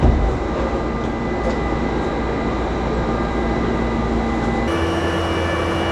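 From 4.68 s to the end at 5.92 s, the sound has a wrong sample rate. It runs about 1.45 times fast and about 6.5 semitones high, which fits 22 kHz material played at 32 kHz. Unlike a pitch shift, timing shortens along with the rise in pitch.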